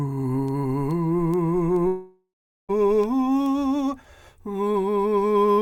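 From 0.48 s to 5.6 s the music carries word clock ticks, about fifteen sharp clicks of uneven strength, arriving roughly every 0.4 s. The receiving device is running on its own clock, off by something like 50 parts per million, so each time the two clocks slip past each other a single sample is dropped or repeated. On a spectrogram these appear as thin vertical lines at a regular spacing. In the waveform each one is a one-sample glitch.

At 1.87 s the music gives way to a fading buzz-like continuation of the last sound, and about 0.43 s of that stretch is silence or near-silence. The music returns at 2.71 s with roughly 0.82 s of material missing. This is a long network dropout: audio likely stopped arriving, and the receiver filled the gap before giving up. On a spectrogram the smeared tail decays into a blank band. The waveform shows the envelope collapsing to a flat line before it resumes abruptly.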